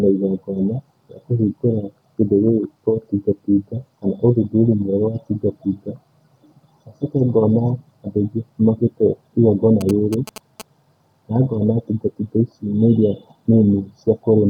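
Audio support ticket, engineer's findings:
GSM signalling bursts, 9.81–10.62 s: galloping ticks and short 217 Hz buzz, well below speech level. Nearby 2G phone signalling; RF bursts rectified in the audio input stage.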